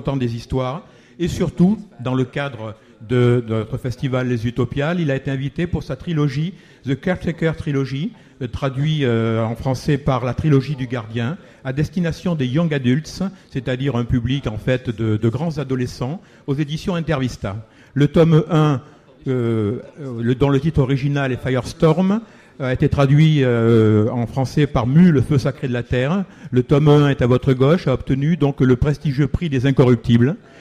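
No technical faults can be heard anywhere in the recording. Nothing in it points to dropouts, clipping or any other breakdown in how the audio was captured or delivered.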